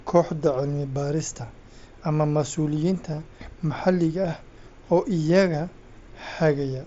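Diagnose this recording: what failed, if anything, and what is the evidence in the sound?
Concealed Bluetooth headset packet loss on the wireless link, with the mSBC band reaching 8 kHz around it. From 3.12 to 3.22 s, gaps totalling 30 ms (none over 15 ms) are filled with repeated recent waveform, visible as copied spectrogram slices; one 7.5 ms patch sits at 4.24 s.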